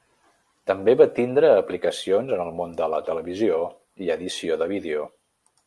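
Listening through the speech recording, nothing stood out as a technical problem.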